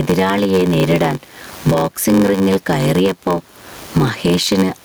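Throughout the speech, gain pumping swings the level by roughly 20 dB, squashing loud and soft parts closer together, likely from excessive input gain driving a fast limiter. The room noise sits about 41 dB below the speech. A block size mismatch (padded) also runs the whole clip, inserting zero-filled gaps that buzz at 93.8 Hz, consistent with 512-sample reads, and slow delivery to 0.861×.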